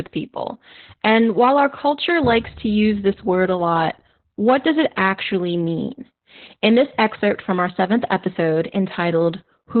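A speech recording carries Opus voice compression from start to finish, with heavy damage: the coder has run in its SILK linear-prediction mode at narrowband, so nothing survives above 4.2 kHz, leaving the voice muffled, hoarse and faintly robotic, which fits a very low bitrate around 8 kbps. On a spectrogram the energy stops at a hard ceiling near 4.2 kHz across the whole clip, and the harmonics below it look smeared and blotchy from the coarse excitation coding.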